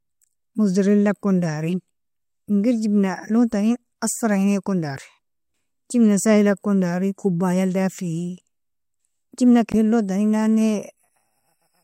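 At 9.71 to 9.75 s, roughly 40 ms of the compressed speech stream carries damaged data: some bytes in that stretch are wrong, so the decoder cannot read those frames properly, loses its place in the bitstream and has to hunt for the next valid frame header before normal decoding resumes. The result is a brief chirp, squawk, click or short hole breaking into the speech.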